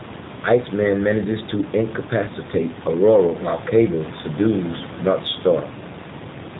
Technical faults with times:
0.00-6.60 G.729 codec

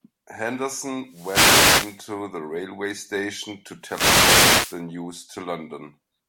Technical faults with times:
1.04-2.09 wireless microphone noise hit
3.80-4.85 wireless microphone noise hit

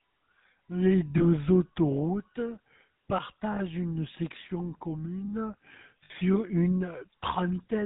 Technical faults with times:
0.00-7.85 GSM full-rate codec
1.18-1.24 lost GSM frames
3.52-3.60 lost GSM frames
6.04-6.11 lost GSM frames

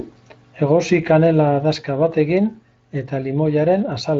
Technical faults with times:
none

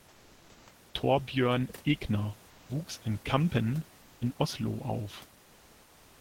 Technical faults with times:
0.00-0.67 comfort noise in place of the background
2.49-2.69 comfort noise in place of the background
2.63-2.69 onset clipped by the voice detector
5.43-6.20 comfort noise in place of the background

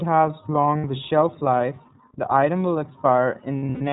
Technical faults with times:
0.00-3.92 iLBC codec
0.78-0.85 lost iLBC frames
3.57-3.81 lost iLBC frames

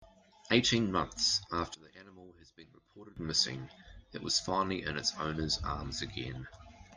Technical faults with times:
1.74-3.17 one channel inverted

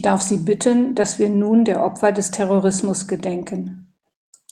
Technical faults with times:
1.01-1.05 short concealed packet loss

